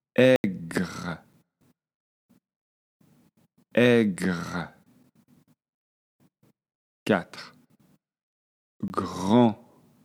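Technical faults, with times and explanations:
0.36–0.44 s, block of digital silence: a block of zeros replaced the audio for 80 ms, leaving a short hole with abrupt edges.
0.74–1.92 s, CD scratch ticks: a surface blemish overwhelmed error correction once per disc turn, so five muted or interpolated patches, the longest about 7 ms, sound as regular ticks.
4.48–7.72 s, CD scratch ticks: damage again exceeded error correction on each rotation, producing twelve evenly spaced ticks, each only a few milliseconds long, as the player patched the gaps.
8.88–8.90 s, block of digital silence: a 20 ms block was replaced with zeros, cutting the sound out and back with no fade.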